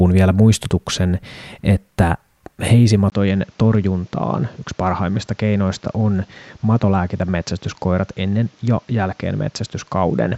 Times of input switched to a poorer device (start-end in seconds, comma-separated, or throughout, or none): 3.10-10.38